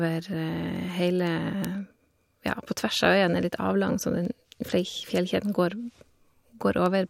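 From 0.15 s to 6.86 s, word clock ticks sound through the speech about every 0.4 s. An unlocked receiving clock, roughly 50 ppm off, drops or repeats single samples.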